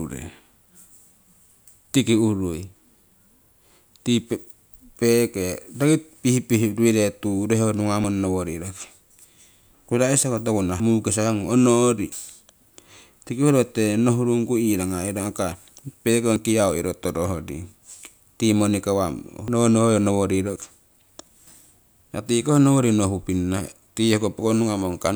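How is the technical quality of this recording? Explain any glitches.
Seven brief glitches interrupt the speech, at 8.04, 10.8, 12.12, 15.52, 16.36, 19.48 and 20.56 s. Each is a sudden jump forward, skipping a few tens of milliseconds up to about a tenth of a second. The likely cause is a dropped buffer (overrun): samples were overwritten before being read, and the surrounding audio was spliced together. Unlike an underrun dropout, no silent gap is heard.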